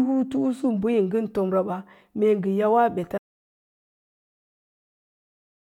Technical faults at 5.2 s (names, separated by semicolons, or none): audio dropout to silence